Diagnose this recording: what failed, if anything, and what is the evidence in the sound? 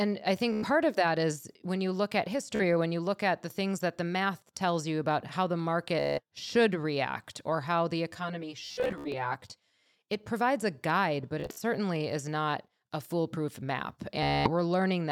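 A buzzing, machine-gun stutter breaks up the speech six times: 0.52–0.65 s, 2.55–2.61 s, 6.00–6.21 s between "you about how the" and "should react or how", 8.66–9.14 s, 11.40–11.62 s between "provides a guide but" and "is not a foolproof", and 14.23–14.51 s after "not a foolproof map". This is Bluetooth stutter, a failure at the wireless transport stage. Packets arrived late or not at all, so the receiver kept replaying its last short slice of sound, then jumped forward. Gaps run from 42 ms to 266 ms, consistent with lost frames of about 14 ms each. At 8.66 s and 11.40 s the losses are scattered across roughly 0.48 s and 0.2 s, with runs up to 70 ms.

From 8.12 to 9.86 s the speech turns hollow and phasey. This is channel delay causing comb filtering, a driver or buffer fault at the playback stage. One channel lags the other by roughly 10 ms, and when the two are summed to mono the shared content cancels at evenly spaced frequencies. 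The first notch sits near 50 Hz, with further notches repeating up the spectrum. The stutter burst at 8.66 s falls inside this stretch.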